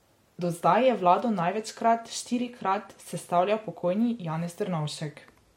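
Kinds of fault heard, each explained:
Transcoding between lossy codecs: the speech carries two kinds of coding damage at once, with nothing above 16.6 kHz. Smeared, swirly highs typical of low-rate HE-AAC sit under MP3-style warble, which fits a likely AAC-to-MP3 re-encode. A single codec leaves only one signature.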